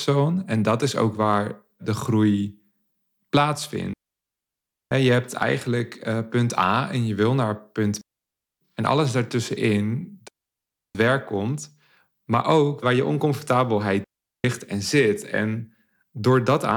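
Digital wireless dropouts occur four times: 3.93 to 4.91 s, 8.01 to 8.61 s, 10.28 to 10.95 s and 14.04 to 14.44 s, muting the speech for roughly 980, 600, 670 and 400 ms. Each time the radio link lost more data than the receiver could conceal, so it faded to silence almost instantly. The result is a clean hole of near silence with no crackle or noise burst at either edge.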